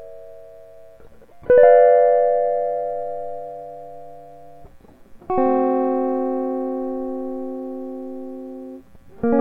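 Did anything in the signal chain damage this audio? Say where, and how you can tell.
No, nothing in the chain damaged this music.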